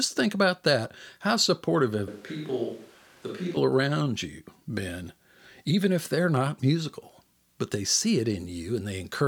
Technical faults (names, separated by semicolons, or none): switch to a distant microphone